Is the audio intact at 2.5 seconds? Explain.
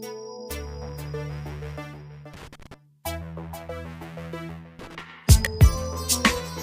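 No, loose connector crackle runs from 2.34 to 2.74 s: a dirty contact makes and breaks, chopping the sound into irregular scratchy bursts, unlike evenly spaced digital clicks.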